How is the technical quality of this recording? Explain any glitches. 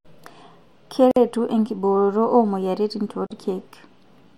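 Two brief dropouts break the speech, each a gap at a join of encoded pieces. They fall at 1.11 to 1.16 s, about 51 ms, and 3.27 to 3.31 s, about 39 ms. Separately encoded segments were spliced without trimming the encoder's start delay and final-frame padding, so silence sits between them. Each sounds like a tiny hiccup before the speech resumes where it stopped. On a waveform or spectrogram, each shows as a narrow blank column with abrupt, slightly smeared edges.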